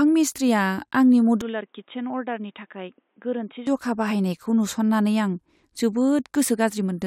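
From 1.41 s to 3.67 s the speech turns dull and boxy, with nothing above 3.8 kHz, drops roughly 10 dB in level and gains a faint new background noise, with no gap at either edge. The input likely switched to a poorer device, then back.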